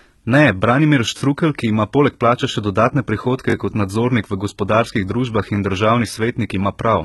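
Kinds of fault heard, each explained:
HE-AAC compression: The speech carries heavy coding damage throughout, likely from HE-AAC at a very low rate, which fits something near 16 kbps. Only the lower spectrum is coded properly. The treble is rebuilt by copying lower bands upward, so it sounds bright but synthetic, and s sounds turn gritty and lispy. A spectrogram shows smeared, repeated-looking texture in the upper band, harmonics that stop lining up above the crossover, and nothing at all above 11.8 kHz.
repeated buffer: Twice, at 1.18 s and 3.5 s, new audio failed to arrive in time. The last 20 ms block was played two extra times, producing a 40 ms stutter with a hard join at each repeat and no audio skipped. At this size it is heard as a click or brief buzz rather than a stuttered syllable. The waveform shows one 20 ms segment tiled three times, with abrupt steps at the seams. On a spectrogram, thin vertical lines mark each join.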